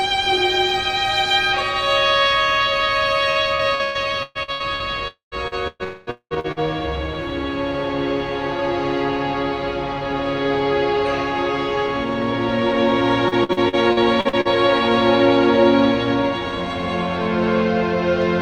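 From 3.31 to 4.83 s, repeated packet loss broke the stream eight times. Each hole was patched by extending the preceding audio, so about 35% of that stretch is concealment covering roughly 0.52 s of lost material, with the longest gap at 123 ms. The result is a choppy, robotic texture with pieces missing.

From 5.08 to 5.35 s, the audio stops arriving. About 0.24 s is patched by carrying on the last sound, which fades and leaves 130 ms of silence before playback resumes without the missing portion. The likely cause is a long network dropout.

From 5.48 to 6.59 s, repeated packet loss returns with six gaps, and concealment fills about 41% of the span. Inside this stretch, from 5.83 to 6.10 s, what is likely another dropout hides about 0.24 s behind continued sound with no silence. The longest gap here is 198 ms, the worst of the clip.

From 13.28 to 14.48 s, eight gaps of up to 52 ms give a lighter but still robotic chopping, with about 27% of the span concealed.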